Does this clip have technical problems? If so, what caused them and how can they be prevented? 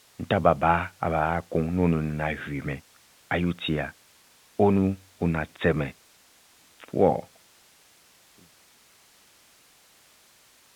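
No, nothing here needs fixing: the speech carries the narrow band of ordinary telephone coding, and the editorial fade-out from around 7.5 s to 8.57 s is smooth and deliberate.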